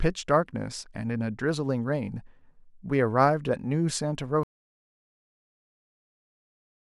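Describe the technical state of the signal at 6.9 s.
At 6.9 s the signal is inside an audio dropout to silence that begins at 4.43 s and runs to the end of the clip. The speech cuts off abruptly mid-flow and is replaced by silence, with no room tone or noise floor remaining. The likely cause is a lost input, such as a disconnected device, a failed link or an unintended mute, while recording continued. Whatever was spoken during this stretch is unrecoverable.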